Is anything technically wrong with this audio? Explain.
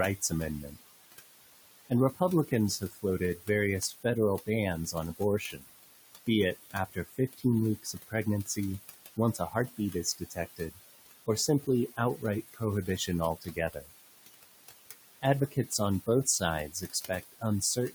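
Yes. Noise suppressor artifacts run through the whole speech clip: the suppressor pulls what it judges to be steady noise down by about 19 dB, band by band, so the room noise sitting about 13 dB below the speech dips between phrases and swells under them.

Speech cut by the noise suppressor occurs at 0.21–0.81, 1.9–5.68, 6.27–8.58, 9.16–13.9 and 15.22–17.94 s, adding up to roughly a few seconds. The suppressor mistakes quieter speech for noise and drops it by about 18 to 20 dB, so consonants and word endings sound swallowed.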